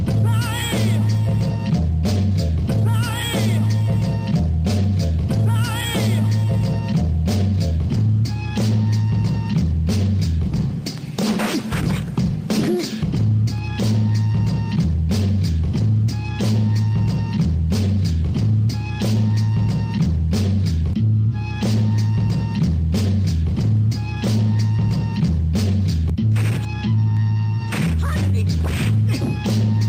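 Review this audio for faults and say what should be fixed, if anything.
No faults; nothing needs fixing.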